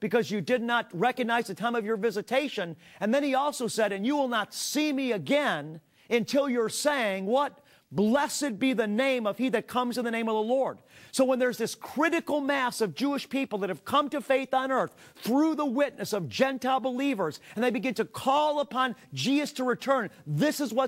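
No technical faults can be heard anywhere in this audio. Nothing in it calls for attention.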